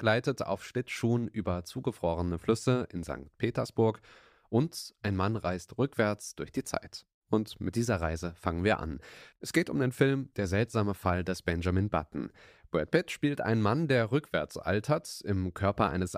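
No technical faults can be heard anywhere in the speech. Nothing interrupts or alters the sound at any point.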